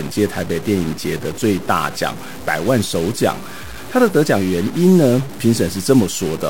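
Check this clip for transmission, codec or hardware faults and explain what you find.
One hardware fault runs through the entire recording.

Stuck bit, throughout: the speech carries a harsh, buzzy distortion, and the pauses fill with noise instead of falling silent. This is likely one data bit held at a fixed value, pushing about half the samples off by a step of about -30 dBFS.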